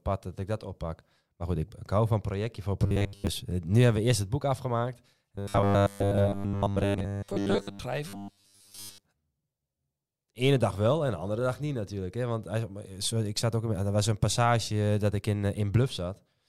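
Robotic sound from repeated short buffers at 2.82 to 3.27 s, after "hou van projectje voor", at 5.35 to 7.79 s, after "eerst het boek afgemaakt", and at 8.08 to 9.03 s: speech becomes a rigid metallic buzz near 100 Hz, likely from a roughly 10 ms block being replayed in place of most of the incoming audio.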